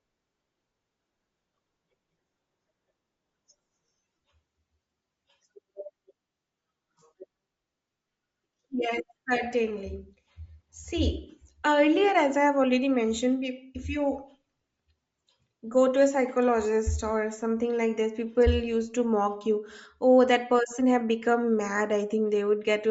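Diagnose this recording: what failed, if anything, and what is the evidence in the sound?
Bluetooth LC3 compression, audible throughout the speech from start to finish, points to the codec stage. The upper spectrum has a breathy, grainy edge, with the finer high-frequency detail replaced by a noise-like texture. That is likely a transform codec starved of bits: it discards much of the top band and fills it with shaped noise. The plainly audible damage fits LC3 running around 32 kbps with 10 ms frames.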